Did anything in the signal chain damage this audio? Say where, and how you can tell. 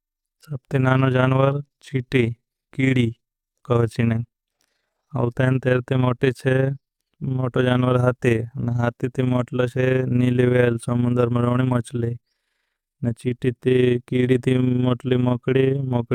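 Yes: overlap-add ripple from a frame-based processing stage. Throughout the speech, level pulses about 6 dB around 30 times a second, a waveform envelope scallop, from windows not summing constant.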